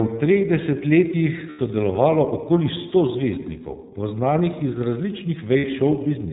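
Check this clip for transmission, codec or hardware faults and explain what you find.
The speech has two transmission and codec faults: iLBC coding throughout the clip and two short bursts of lost iLBC frames.

The whole clip is iLBC-coded. This narrowband codec codes each frame's excitation independently, and nothing above 4 kHz survives. The roughness, which fits the 13.33 kbps, 30 ms-frame mode, is plainly audible as a slightly synthetic texture. On a spectrogram, energy stops sharply at 4 kHz.

Lost iLBC frames occur at 1.49–1.59 s, about 90 ms (likely three frames), and at 5.58–5.65 s, about 60 ms. The decoder concealed each gap by repeating the last pitch cycle mixed with noise, so each sounds like a brief held, buzzy vowel. The waveform shows repeated cycles, and the spectrogram shows flat, unchanging harmonic stripes.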